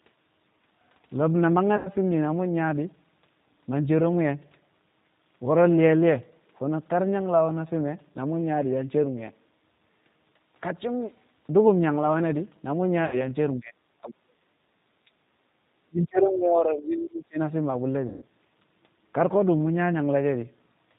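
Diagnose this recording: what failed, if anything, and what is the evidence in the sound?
G.729 codec throughout, at the codec stage: the 8 kbit/s speech sounds rough and synthetic with nothing above 4 kHz, because it is rebuilt from a filter, pitch predictor and sparse pulses.

VoIP packet loss concealed by the speech codec, at the network stage, at 1.77–1.90 s, 13.05–13.27 s and 18.08–18.25 s: roughly 80, 80 and 140 ms of audio were lost. The decoder extrapolated from its last pitch and filter with fading gain, and the speech recovers slowly afterwards.

Speech suppressed in double talk, at the call-processing stage, at 13.55–13.73 s, 14.01–14.48 s and 15.78–17.39 s: the speech dips by about 15 dB, then by up to about 35 dB. The likely cause is an echo canceller ducking the talker while the far side spoke.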